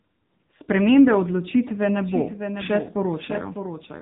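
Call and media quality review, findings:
AMR narrowband mobile codec, whole clip: speech squeezed into 8 kHz narrowband, cut off above 3.8 kHz. Heavy coding damage, buzzy synthetic vocal-tract sound consistent with a low AMR-NB mode around 6.7 kbps. Thin, muffled, robotic throughout.

Doubled audio track, 2.04 s to end: second full-band copy of the speech mixed in, likely a slower capture path or misaligned edit. Trails by roughly 0.7 s, about 10 dB down, dry, enters abruptly. Audible as a flat, detached echo.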